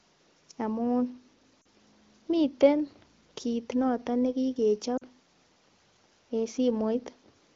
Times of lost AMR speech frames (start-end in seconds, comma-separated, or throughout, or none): 1.62-1.65, 4.97-5.03